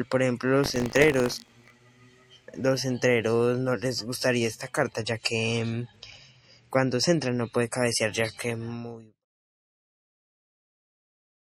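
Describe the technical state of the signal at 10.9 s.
At 10.9 s the signal is in the adaptive stream at a lower bitrate, running from 4.96 s to the end: a slowed connection switched playback to a leaner encode. The treble is dulled and swirly, consistent with a fall from about 128 to 48 kbit/s MP3. A spectrogram shows a hard ceiling at 14.8 kHz.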